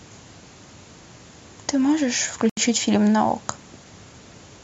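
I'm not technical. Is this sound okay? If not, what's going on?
No. There's a Bluetooth stall at 2.50 s: the speech drops to silence for 77 ms, then carries on. The likely cause is wireless interference holding up the audio data, so the headphones ran out of sound to play and paused until it arrived.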